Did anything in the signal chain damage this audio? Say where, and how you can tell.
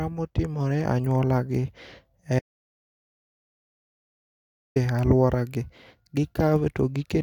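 Yes. The input path likely lost its signal for a stretch, through a disconnected device, a failed link or a mute, while the recorder kept writing silence. This is an audio dropout to silence: the speech cuts off abruptly at 2.39 s and returns mid-flow at 4.76 s with "alwora gi". The 2.37 s gap is silent with no room tone, which points to the capture stage rather than a quiet talker, and whatever was said during it is gone.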